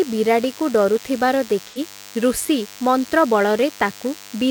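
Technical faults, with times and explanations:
Throughout, DECT cordless phone buzz: a thin, steady 100 Hz buzz with a stack of harmonics sits about 20 dB under the speech. That's a nearby DECT handset or base firing its radio burst every 10 ms, and the audio circuitry rectifying it.
1.66 to 1.79 s, AAC frame loss with concealment: a brief smeared, noisy or phasey patch. The gap fits about 85 ms of missing AAC data, roughly two frames, which the decoder papered over by reusing the last good spectrum.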